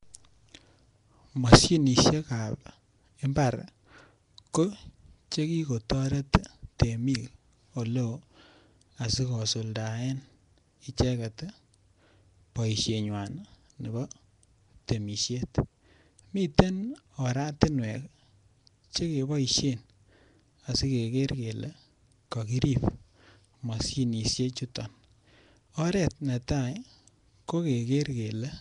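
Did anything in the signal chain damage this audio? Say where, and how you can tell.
Yes. The codec stage left plainly audible damage across the whole speech clip, most likely Nellymoser compression. The voice carries a rough, hissy halo and a smeared, underwater quality, and nothing is present above 10.6 kHz, which fits a bitrate around 44 kbps. Fixed two-bit quantisation over short blocks starves weak bands, which are then filled with noise. Broadband line hiss would sit steadily underneath; this noise follows the voice's own spectral shape.

Pre-echo appears at 6.33 s, where a sharp attack is preceded by about 11 ms of hiss and its onset sounds softened. This also comes from the codec. The transform spreads quantisation noise evenly across its block, so noise sized for the loud attack leaks into the quiet moment just before it. A click or dropout would be a discrete glitch, whereas this smear leads the attack and is shaped by it.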